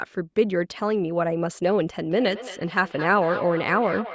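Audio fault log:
2.06–4.15 s, feedback echo between two devices: a nearby device replays this microphone's output back into it, so speech repeats roughly every fifth of a second, thin and ringing, peaking about 12 dB below the speech.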